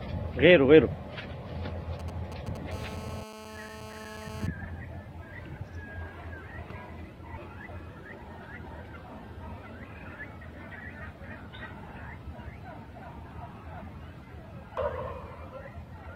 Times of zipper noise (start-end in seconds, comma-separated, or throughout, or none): none